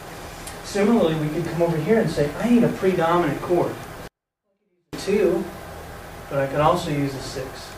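At 4.08 s the sound suddenly drops by about 48 dB. It stays almost inaudible until 4.93 s. This is a 24-bit alignment error. Samples sitting in the low bytes of a 32-bit word were read as full 32-bit values. The signal stays clean but shrinks drastically.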